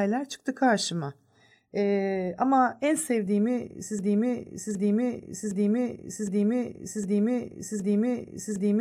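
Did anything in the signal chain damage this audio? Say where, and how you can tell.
Yes. Right after "ama en sevdiğimi", at 3.99 s, the audio locks into a broken-record loop: a 0.76 s fragment repeats exactly, back to back, six times, and this continues to the end of the clip. Nothing new is heard after that point, so whatever should have followed is gone. The likely cause is a stall in the playback or streaming stage, where the player kept re-sending the last buffered fragment instead of fresh audio.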